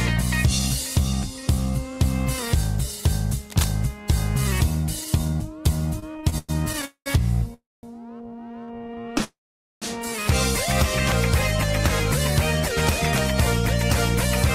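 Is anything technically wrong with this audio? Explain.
Yes, there are three kinds of fault.

From 3.50 to 3.69 s a burst of cable scratch noise, at roughly 10 dB below the sound, adds a dense, uneven rasp over it. This is likely a worn cable, connector or control being moved, so its contact resistance jumps rapidly.

From 5.99 to 6.85 s and again from 8.59 to 9.22 s the audio drags and stutters. Those are repeated stalls (stutter), with nine and then eleven short holds, the longest 105 ms, covering over a quarter of each span. Packets were arriving late, so the jitter buffer kept emptying and the last sound was stretched until playback could continue. Nothing is lost.

At 6.85 to 7.08 s, 7.54 to 7.85 s and 9.24 to 9.84 s the sound hangs as a fading continuation, then silence of 90, 220 and 470 ms, before resuming where it stopped. Each is a call audio freeze, likely from packets held up in transit, which left the jitter buffer empty and inserted gaps of 0.21, 0.29 and 0.58 s.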